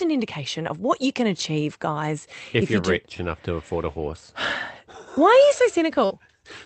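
Just after "are you", from 6.05 to 6.11 s, a burst of packet loss leaves a gap of about 47 ms that the receiver fills by continuing the last sound and fading it, so it becomes a held buzz if that sound was voiced or a dying hiss if not. About 50 ms of audio is gone, and playback picks up further along. Unlike a plain dropout, the hole is not silent, and unlike a stutter, nothing repeats. Over the Opus call path, content above about 8 kHz is cut off.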